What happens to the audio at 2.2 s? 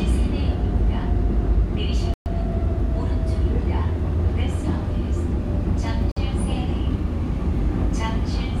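Right around there, from 2.14 to 2.28 s, the audio drops out to about 122 ms of dead silence and then carries on. That's likely a Bluetooth stall: interference held up packets, the headphones' buffer ran dry, and playback paused until resent data arrived.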